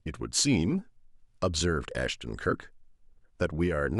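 Listening to the speech in this clip, nothing stood out as a technical problem.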